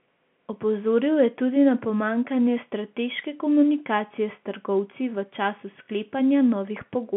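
No technical faults occur at any point in the speech, which carries the ordinary narrow band of a G.711 telephone line.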